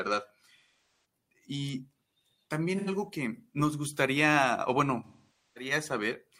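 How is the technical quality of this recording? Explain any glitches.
One glitch stands out near the end. AAC frame loss with concealment occurs from 5.04 to 5.71 s. About half a second of coded audio, enough to suggest a run of a dozen or so frames, never reached the decoder. The decoder papered over the gap by reusing the last good spectrum with randomised phase and tapering its energy. Over a loss this long, the speech smears into a hollow, noisy wash that sinks toward silence and then fades back in.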